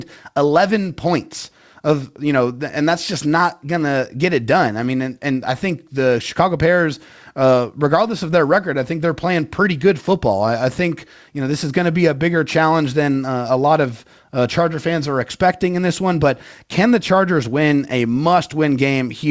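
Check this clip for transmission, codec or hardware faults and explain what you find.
No faults turn up in this clip.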